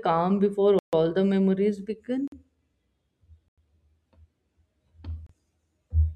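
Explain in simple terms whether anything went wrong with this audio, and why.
Four blocks of digital silence cut into the speech: at 0.79 s (0.14 s long, after "calm before"), 2.28 s (after "the memories"), 3.48 s and 5.27 s. Each time, the audio drops abruptly to silence and returns, leaving a short hole.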